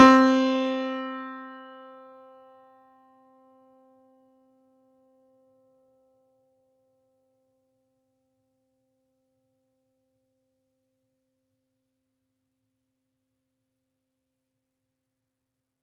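From the start and right through the music, a noise suppressor built for speech is clearly left on. It treats the sustained parts, held notes, room ambience and reverb tails, as noise and pulls them down, while attacks slip through mostly intact. So the music pumps: hits land, then the body sags by something like 15 dB and the decay thins out and flutters. That's all on top of a call-style path whose top end stops around 12 kHz.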